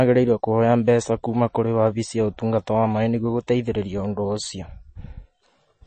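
A speech recording with plainly audible compression damage from start to finish. Nothing is present above about 8.3 kHz, so the top of the spectrum is cut off sharply. The likely cause is MP3 compression at a low bitrate, fitting roughly 32 kbps. With so few bits, the encoder drops the treble and discards weak frequency components, which flicker in and out between frames. The result is a watery, swirling texture throughout.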